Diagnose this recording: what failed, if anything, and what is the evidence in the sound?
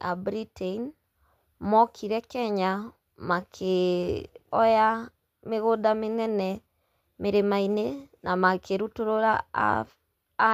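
Nothing stood out on listening to this speech recording that would point to a failure at any stage.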